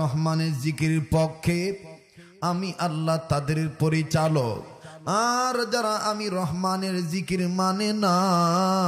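Nothing in the signal points to a technical fault at any point; level, continuity and timing all hold steady throughout.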